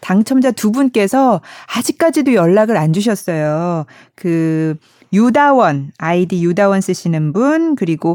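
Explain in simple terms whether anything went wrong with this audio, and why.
Nothing went wrong with this speech recording; no technical faults can be heard anywhere in it.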